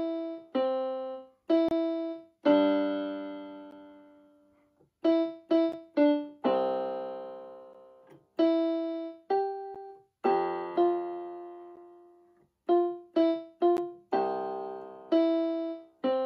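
Gaps at joins of encoded pieces break the sound at 1.69, 3.71, 5.72, 7.73, 9.75, 11.76 and 13.77 s, every 2 seconds. The first lasts about 27 ms, the rest about 11 ms. Separately encoded pieces were joined untrimmed. Each drop has smeared edges.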